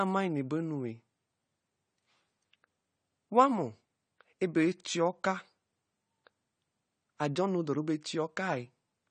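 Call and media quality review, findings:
AAC compression throughout, likely low-bitrate AAC-LC, fitting about 32 kbps: nothing above 9 kHz, plainly audible codec damage, speech dull and smeared, warbling fizz on sibilants.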